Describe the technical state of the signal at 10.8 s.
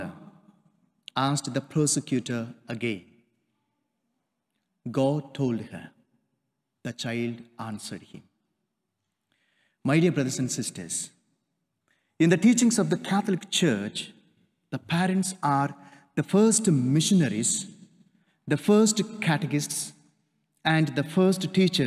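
At 10.8 s the signal is intact, with no fault heard at that moment.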